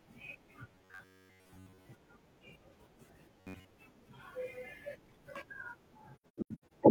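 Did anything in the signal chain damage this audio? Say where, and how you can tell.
Yes. Robotic sound from repeated short buffers appears at 0.72 to 1.86 s and again at 3.40 to 3.74 s, in the driver or buffer stage. The speech turns into a stiff, metallic buzz pitched at 93.8 Hz that still roughly follows the speech. That pitch fits a period of about 10.7 ms. The likely cause is new audio arriving too seldom, with the software replaying the last short stretch to fill the gap, so most of the real signal in those spans is skipped.

AAC frame loss with muting sits between 6.17 and 6.72 s, at the codec stage, probably after network loss. Across that 0.55 s the sound drops into a series of soft-edged holes totalling 384 ms of missing audio, with the longest gap around a tenth of a second. The pattern points to about nine lost frames. The decoder zeroed the spectrum for each one, and the overlapping windows fade the sound out and back in rather than cutting it abruptly.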